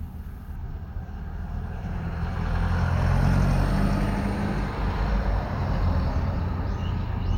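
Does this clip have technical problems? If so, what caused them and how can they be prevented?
Yes. From 0.56 s to the end, the top end of the sound is dulled, as if a fixed filter were sitting on it. This is channel delay (comb filtering). One channel runs late by roughly two samples, about a twentieth of a millisecond, and when the two are summed to mono, shared content cancels at evenly spaced frequencies, with the first notch around 10 kHz. To prevent it, align the channels sample-accurately before any mono fold-down, and check the summed result for phase cancellation.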